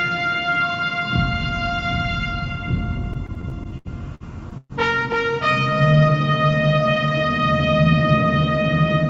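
Between 3.13 and 4.73 s the audio drags through a run of repeated stalls (stutter). Packets reached the receiver's jitter buffer late, so it ran dry eleven times and patched each hole by stretching the preceding sound, for about 362 ms in total with nothing actually lost. The longest pause is 120 ms. On a spectrogram the span shows smeared, horizontally frozen bands in place of changing detail, and the waveform shows repeated, faded-out chunks. The content throughout sits below 8 kHz, which fits the call path's wideband limit.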